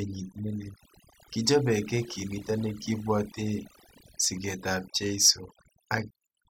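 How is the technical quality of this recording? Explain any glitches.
The recording has one fault, present throughout. Overdone noise removal runs from start to finish: a noise reduction stage was pushed too hard, so any frequency band sitting close to its idea of the noise floor gets pulled far down or switched off, and the quieter parts of the speech are caught too. Between phrases the background drops and breaks up into twinkling, warbling specks.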